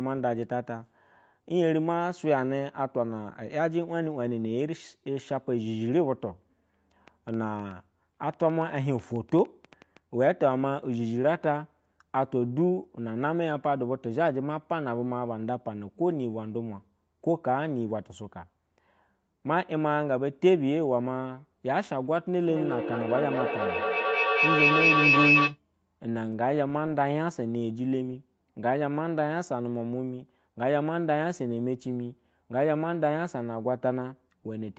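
From 7.08 to 9.98 s there's a train of clicks: roughly twenty sharp pops at about 6.6 per second, irregularly spaced and peaking around speech level, ticking over everything, gaps included. It's likely interference from nearby gear or a faulty connection or power supply.

Then from 22.42 to 25.59 s a feedback howl builds up, as two devices on the same call loop mic to speaker and back with gain each pass. It settles near 3 kHz, pulses roughly every fifth of a second, and peaks about 5 dB above the speech before it cuts off.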